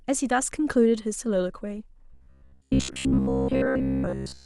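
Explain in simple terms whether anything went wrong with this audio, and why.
From 2.12 s to the end at 4.45 s the speech turns into a stiff, metallic buzz: robotic sound from repeated short buffers. A fixed drone of about 67 Hz sits on top, which fits a roughly 15 ms chunk being replayed again and again, likely because fresh audio arrived too slowly. Unlike a dropout or stutter, there are no gaps. The words stay loosely traceable while most of the real sound is skipped.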